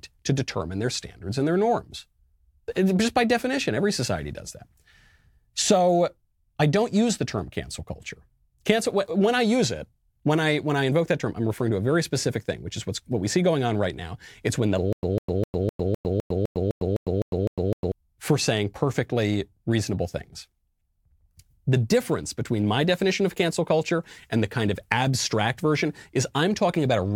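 From 14.93 s to 17.92 s, just after "when the", the speech falls into a stutter with silent gaps: one 152 ms fragment plays twelve times, each followed by 103 ms of dead digital silence, an even cycle of about 255 ms. The likely cause is a stalled stream replaying its last fragment at each retry. Unlike a plain dropout, the same burst keeps returning on a steady beat, and the speech that belonged there is lost when it resumes at "for saying perfectly reasonable".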